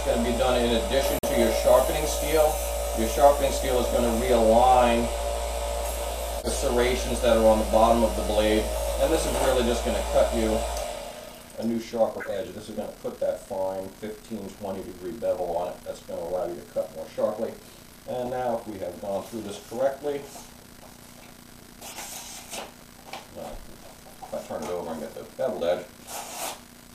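Corrupt frame muted at 1.19 to 1.33 s: the decoder rejected damaged compressed data, and the player substituted silence, leaving an abrupt 0.15 s gap, which fits three frames.

Corrupt frame decoded at 6.39 to 6.63, 12.20 to 12.34, 21.82 to 21.97 and 23.63 to 23.67 s: damaged frames played anyway and misplaced energy as chirpy noise bursts, peaking around -15, -20, -25 and -35 dBFS.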